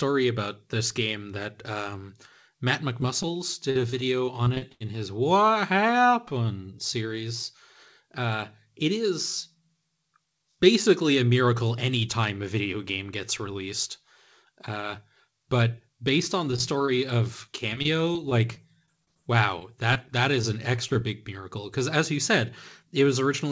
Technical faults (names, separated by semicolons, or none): short concealed packet loss; repeated packet loss (robotic sound); scattered short gaps